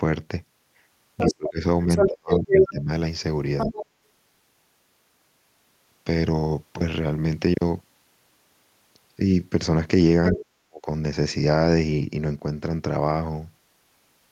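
Other side's voice leaking through appears first at 1.17 to 1.34 s, a second voice a little below the talker. It returns at 1.88 to 2.7 s, slightly louder than the talker, then at 3.58 to 3.86 s and 10.25 to 10.45 s, again somewhat quieter. These are brief scraps of far-end audio, likely because the loudspeaker playback reached the microphone and the echo canceller left part of it in place.

Speech suppressed in double talk overlaps each leak. From 1.29 to 2.9 s the talker's level falls, with about a second cut in total and dips around 30 dB deep. At 3.66 to 3.72 s there is only a slight, momentary dip. From 10.34 to 10.88 s the voice drops out more sharply, around 40 dB down for close to half a second. This is likely the canceller treating the overlap as echo and attenuating both voices together.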